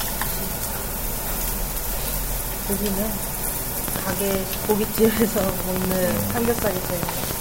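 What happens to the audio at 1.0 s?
Nothing goes wrong at 1.0 s; the everyday sound carries on intact through that moment, with no dropout, click or other fault.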